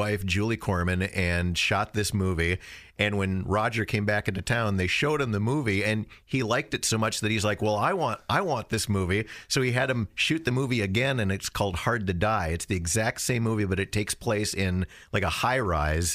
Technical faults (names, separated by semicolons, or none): none